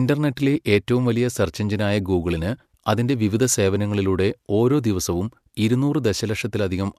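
No technical faults can be heard anywhere in this speech recording. There is nothing to place on a timeline, since no moment stands out as a disturbance at any point.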